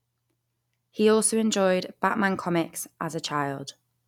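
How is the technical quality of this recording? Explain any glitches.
The technical quality of the recording is sound, with no glitches to explain.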